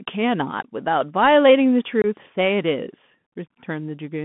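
From start to finish the speech sounds boxed-in and scratchy, with a granular hiss beneath it and gritty s sounds. Nothing below about 150 Hz or above 3.5 kHz gets through. This is the Bluetooth CVSD headset codec: its one-bit up-or-down steps can't track sharp high-frequency changes, which fits a 64 kbps narrowband link.

At 2.02 to 2.06 s the speech drops out for about 22.5 ms, with hard edges on both sides, then returns briefly quieter. That is unconcealed Bluetooth headset packet loss: a few short voice packets never arrived and were replaced with silence or an idle pattern.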